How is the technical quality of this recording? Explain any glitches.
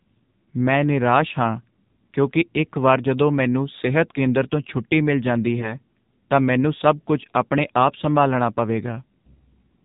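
The speech has been carried through the AMR narrowband mobile codec at about 7.4 kbps. Sampling at 8 kHz leaves nothing above 4 kHz, and the sparse pulse excitation of the vocal-tract model at this low bitrate makes the voice plainly buzzy and synthetic throughout.

From 5.60 to 5.74 s, between "ਤੋਂ ਛੁੱਟੀ ਮਿਲ ਜਾਂਦੀ" and "ਤਾਂ ਮੈਨੂੰ ਸਭ ਕੁੱਝ", AMR bit errors corrupted a few frames, roughly one bit in twenty, while the checksum still passed. Misplaced pulses and skewed fine parameters turn the voice hoarse and gargly, though pitch and level roughly hold.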